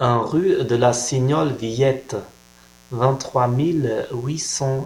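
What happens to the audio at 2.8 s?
At 2.8 s the speech sits under mains buzz running from 0.31 s to the end: 60 Hz switching spikes with harmonics into kilohertz, a raspy buzz about 30 dB down, unlike hum's smooth low tone.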